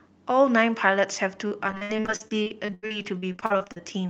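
From 1.47 to 3.88 s the speech breaks up with repeated packet loss, giving a robotic sound. 28 short gaps, the longest about 84 ms, get patched by stretching the last bit of sound. That covers roughly a third of the stretch, so it comes out choppy.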